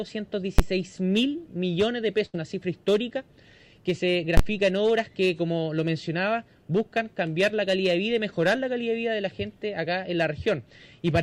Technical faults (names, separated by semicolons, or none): invalid numbers at full scale; burst of packet loss